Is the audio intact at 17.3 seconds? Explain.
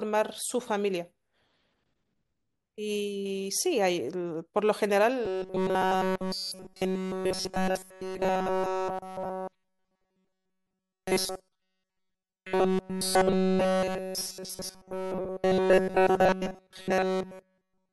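No, at 17.3 s you're in the middle of robotic sound from repeated short buffers, which runs from about 5.25 s right to the end at 17.93 s. What you hear is a rigid, metallic buzz pinned at 188 Hz that still loosely tracks the speech. The likely cause is audio arriving too seldom, so the playback keeps looping a tiny chunk, around 5.3 ms, which fits that pitch, and skips essentially all the real audio.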